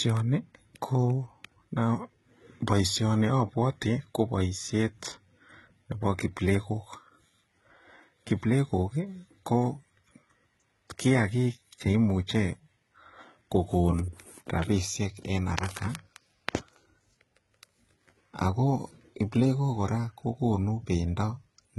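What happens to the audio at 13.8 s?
At 13.8 s, as throughout the clip, the speech carries heavy damage from what is likely HE-AAC compression at a very low rate, which fits a bitrate near 16 kbps. The encoder keeps only the lower spectrum and synthesises the treble by copying lower bands upward under a coarse envelope. That rebuilt top end sounds false: harmonics fail to align across the crossover, so sibilants come out gritty, metallic or lisping.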